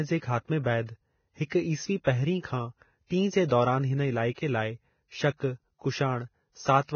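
From start to finish the speech sounds hissy and grainy with nothing above 6.5 kHz, likely Vorbis compression at a low bitrate near 18 kbps. A spectrogram shows a hard ceiling with speckled treble.

Pre-echo appears at 1.48 to 1.52 s and 3.07 to 3.11 s. Codec noise spreads about 34 and 42 ms ahead of sharp onsets, showing as smears before the waveform's attacks.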